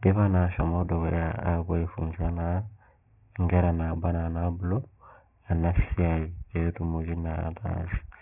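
From the start of the speech to the end, aliasing is present. Everything the voice had above 3 kHz has been folded back down below that edge, which fits a drop to a 6 kHz rate with no filter first. Sibilants come out gritty and metallic, with wrong, unrelated tones sitting roughly 25 dB under the voice, and the spectrum stays busy right up to 3 kHz. A plain low-pass would only sound muffled, with no added false tones.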